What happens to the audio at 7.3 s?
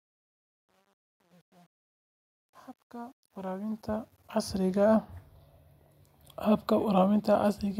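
At 7.3 s the audio is intact, with no dropout, click, distortion or level change at that moment.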